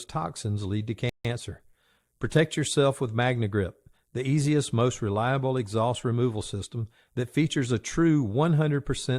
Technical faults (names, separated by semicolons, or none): rebuffering stall